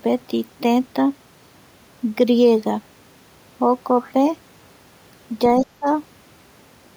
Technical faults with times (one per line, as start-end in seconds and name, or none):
5.62-5.86 speech suppressed in double talk